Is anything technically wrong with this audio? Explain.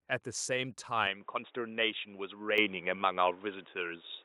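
Yes. Two faults are audible in this speech clip.

At 1.07 s the input appears to switch to a poorer device, and the change lasts to the end. The sound turns dull and boxy at once, with no gap at the switch. The likely cause is the system moving to another microphone or a headset's call profile, which passes a narrower band. A new, faint background noise sits well below the signal. The overall level stays about the same.

At 2.58 s the microphone volume steps up by about 7 dB. This is a single, sudden jump. The speech and the background rise together, because the gain is applied before anything else in the chain. Call software does this when it judges the microphone too quiet. It raises the device's input volume in one step instead of a gradual ramp. The jump lands partway through the already narrowed sound.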